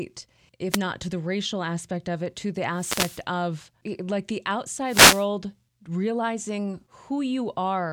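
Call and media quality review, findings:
Wireless microphone noise hits at 0.70–0.79 s, 2.74–3.22 s, 4.85–5.27 s. Short static swishes. Analogue FM link fading as reflections cancel; receiver noise surfaces.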